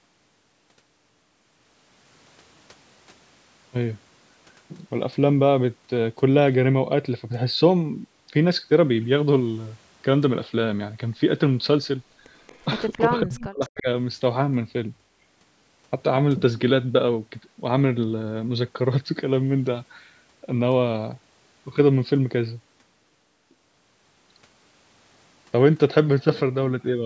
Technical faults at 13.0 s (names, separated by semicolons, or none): echo leak; speech suppressed in double talk